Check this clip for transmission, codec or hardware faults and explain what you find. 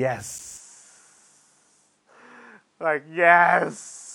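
Two faults are present in the speech: a CD skip near the start, and a drop in bandwidth that persists from just after it to the end.

At 0.38 s there is a CD skip. The player's laser was thrown off its track, by a knock or a disc flaw, onto a different turn of the spiral. Playback mutes for only a few milliseconds and resumes from that other position. The result is a small tick and an abrupt discontinuity, with the speech jumping rather than running on.

From 0.57 s to the end, the sound is band-limited. Nothing is present above 11.4 kHz, so the top of the spectrum is missing and the speech is duller than before. A faint new background noise appears, about 50 dB below the speech. The level stays about the same and there is no gap at the transition. The change is abrupt and then holds steady, which points to the input likely being switched to a poorer device partway through, such as a second microphone or a headset's call profile with a narrower passband.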